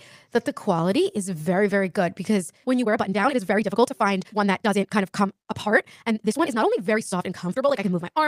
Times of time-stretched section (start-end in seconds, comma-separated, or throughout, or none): 2.76-8.28